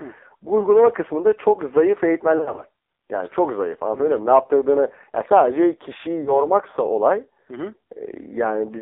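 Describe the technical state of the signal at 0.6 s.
At 0.6 s, lost AMR speech frames cause a short break from 0.60 to 0.66 s. Radio errors corrupted the data, so the decoder had nothing valid to play. It reused the last good pitch and vocal tract settings at falling gain. The speech dips and warbles briefly, then recovers, rough at first. The short span fits a single lost 20 ms frame, smoothed over by the decoder's concealment.

The AMR narrowband mobile codec also shapes this moment, as it does the whole clip. Speech is carried only between about 300 Hz and 3.7 kHz. The decoder rebuilds the voice from a vocal tract model driven by sparse pulses. The damage is heavy. The voice sounds buzzy, thin and synthetic, which points to a very low bitrate of about 6 kbps.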